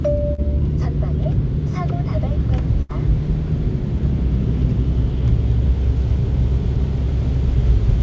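Around 0.34 to 0.40 s there's a short concealed packet loss: about 40 ms never arrived, so the receiver stretched the preceding sound over the hole, leaving a quick smear before things blend back in.

Then at 2.82 to 2.91 s comes a burst of packet loss. Roughly 70 ms gets filled with the last sound fading out, and when the audio picks up again, about 80 ms of the original is simply gone.

Through all of this the band stops at 8 kHz, which fits a G.722-style call codec.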